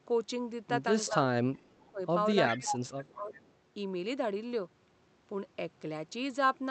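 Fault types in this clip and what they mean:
Speech suppressed in double talk, at 1.1–1.2 s, 1.55–2.01 s and 2.56–3.32 s: the speech dips in level while both sides talk at once. It drops only slightly at 1.1 s, by about 30 dB through 1.55–2.01 s and by about 25 dB from 2.56 s. The likely cause is an echo canceller that cannot separate its own talker from loudspeaker echo and so turns both down together.
Echo leak, at 2.47–2.74 s and 3.31–3.51 s: a delayed copy of the speech comes back 376 ms after the original. The first scrap is fairly strong, about 5 dB below the speech, and the second is faint, about 25 dB down. This likely comes from a loudspeaker on one side whose echo canceller let part of what its microphone picked up through, which was then sent back over the call.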